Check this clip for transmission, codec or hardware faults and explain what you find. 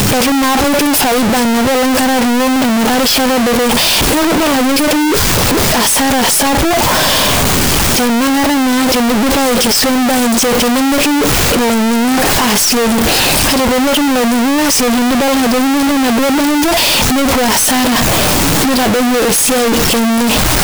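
There is one fault, and it affects the whole clip. Every part of the speech is extremely loud and harsh, pressed into a near-square waveform at an almost fixed, high level, and the background noise comes through as loud as the speech. Pitch can still be followed. This is float read as integer, likely from 32-bit floating-point samples being read as 32-bit integers. Their sign and exponent bits then set each sample's value, so the original level no longer matters.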